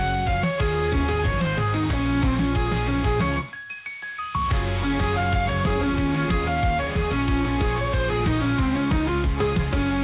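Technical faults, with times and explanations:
No technical faults can be heard anywhere in this clip.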